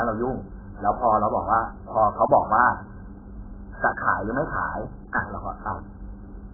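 From start to finish the speech is heavily squashed, with nothing above about 1.8 kHz, so it sounds dull and muffled, as if heard through a wall. The likely culprit is AAC compression, most likely AAC-LC at a very low bitrate, something like 8 kbps. With so few bits, the encoder drops the top of the spectrum, so the sound smears and takes on a warbly, watery texture on sustained sounds and sibilants.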